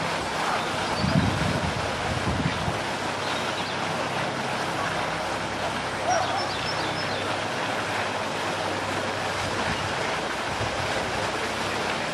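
No audible technical faults on this recording; nothing to flag.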